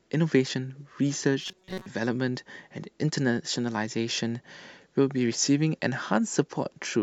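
A speech clip with one fault: robotic sound from repeated short buffers. From 1.41 s to 1.86 s, the voice turns into a rigid, metallic buzz. It still roughly tracks the speech. The buzz sits at 188 Hz, which points to a repeated chunk of about 5.3 ms. Most of that stretch, around 70 percent, is filled with repeats. The likely cause is audio arriving too seldom, so the software loops the last short buffer and skips real sound.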